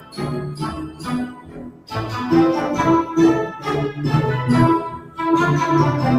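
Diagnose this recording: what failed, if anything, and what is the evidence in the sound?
Call processing: a noise suppressor applied to music or sounds stayed active, treating sustained material as noise, so levels pump across a swing of around 15 dB.

Sound cut by the noise suppressor: steady passages sink at 0.0–0.21 s, 0.53–1.09 s, 1.26–1.93 s and 4.9–5.19 s, dropping about 11 to 14 dB.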